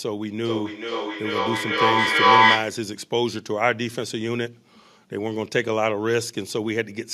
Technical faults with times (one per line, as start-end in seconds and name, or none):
0.45-2.86 feedback echo between two devices